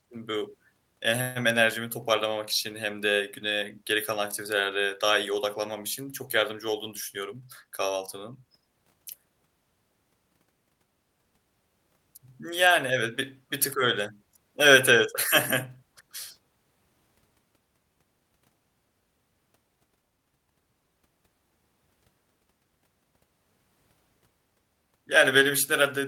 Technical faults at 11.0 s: none

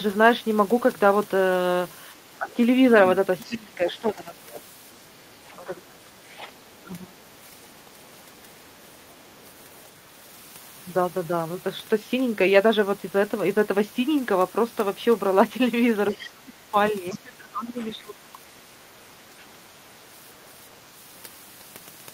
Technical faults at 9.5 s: other side's voice leaking through

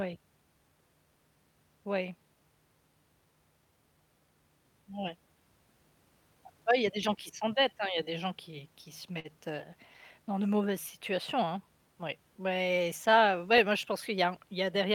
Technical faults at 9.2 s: short stall from a late packet

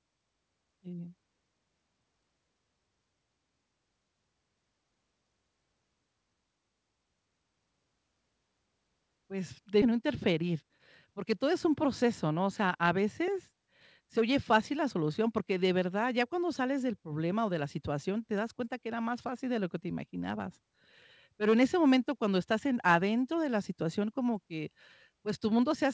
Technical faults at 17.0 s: none

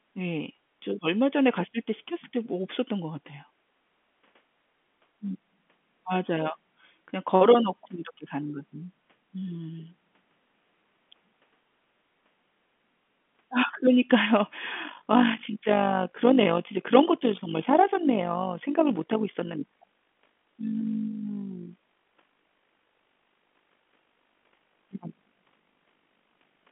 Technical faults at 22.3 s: overlap-add ripple

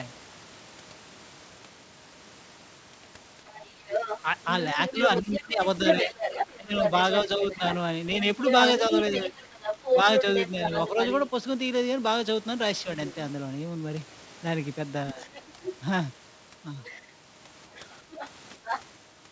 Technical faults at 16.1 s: other side's voice leaking through

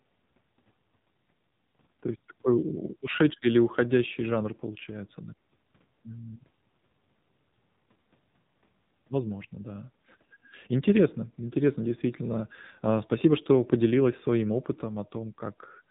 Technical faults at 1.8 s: AMR narrowband mobile codec

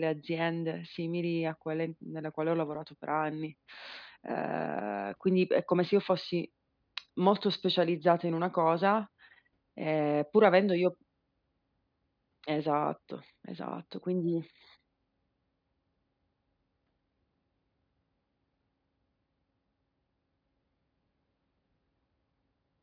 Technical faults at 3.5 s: none

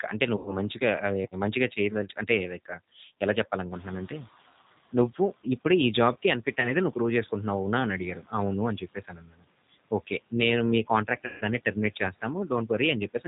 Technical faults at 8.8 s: G.729 codec; speech cut by the noise suppressor

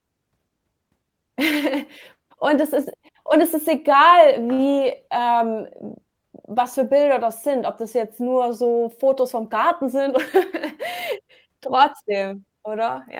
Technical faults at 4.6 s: short stall from a late packet

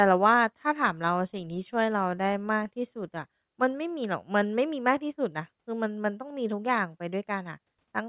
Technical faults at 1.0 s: none

